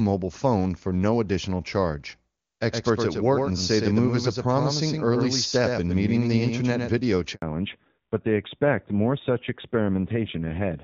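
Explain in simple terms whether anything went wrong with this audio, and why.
Three things go wrong in this call.

From 2.71 to 6.99 s there is a doubled audio track: a second, somewhat quieter copy of the speech trails about a tenth of a second behind, with no echo tail, giving a stuttering slapback. It likely comes from the same sound being picked up twice along paths of different speed.

At 7.34 s there is a handover gap. The phone switched networks and nothing got through for 80 ms. The speech fades out almost instantly and stays silent until the new connection picks it up at 7.42 s.

From 7.42 s to the end, the call falls back to narrowband. Up to that point the HD Voice link carries clear, full-sounding speech. After the switch, everything above 4 kHz is gone, so the voice turns muffled and rougher, like an old phone line.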